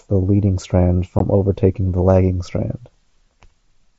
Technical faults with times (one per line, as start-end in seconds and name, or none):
1.19 unconcealed Bluetooth headset packet loss